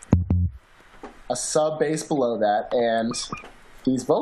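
A corrupt frame decoded at 2.13 to 2.18 s: bits inside a couple of compressed frames were flipped, and the decoder played them anyway instead of concealing them. The misread codes and gains put energy at frequencies that don't belong to the sound, so for those roughly 50 ms the audio has a short, synthetic blip or chirp, peaking at about -35 dBFS, lasting about as long as the damaged frames.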